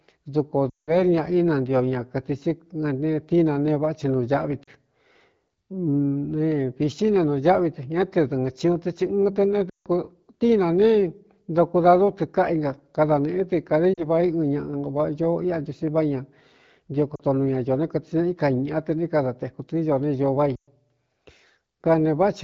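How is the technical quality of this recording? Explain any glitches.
The speech carries two faults: repeated dropouts and a faint roughness. The wideband HD Voice coding sounds clear, as expected at a mid-range AMR-WB rate.

Lost AMR speech frames occur at 0.69–0.93 s, 4.63–4.70 s, 9.70–9.87 s, 13.93–14.04 s, 17.15–17.22 s and 20.55–20.68 s. Corrupted frames force the decoder to repeat earlier parameters at falling gain. The sound drops to near silence within two frames, in gaps of 40 to 180 ms, then returns weak or rough.

Sample clock jitter runs throughout. A converter clock wobbling by around a microsecond adds faint hiss, roughly 50 dB down, that grows on loud, bright sounds.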